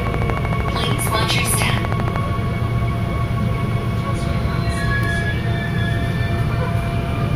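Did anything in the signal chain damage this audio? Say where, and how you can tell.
Yes. A train of clicks runs from about 0.07 s to 2.17 s, most likely from electrical interference coupling into the analogue wiring or a faulty connection or power supply. Regularly spaced pulses arrive about 12.9 times per second, some thirty in all, each with much the same shape. They peak roughly 15 dB above the underlying sound, so they are heard as a steady ticking laid over it rather than blended in.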